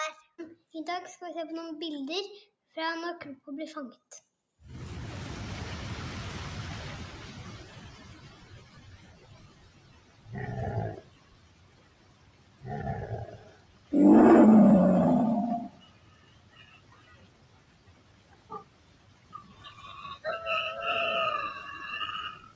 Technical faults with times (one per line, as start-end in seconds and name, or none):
0.00-22.55 noise suppressor applied to music or sounds
0.57-0.74 sound cut by the noise suppressor
2.48-2.75 sound cut by the noise suppressor
3.98-4.60 sound cut by the noise suppressor
7.74-10.32 sound cut by the noise suppressor
11.00-12.66 sound cut by the noise suppressor
13.26-13.92 sound cut by the noise suppressor
14.05-14.84 hard clipping
15.65-19.96 sound cut by the noise suppressor
22.34-22.55 sound cut by the noise suppressor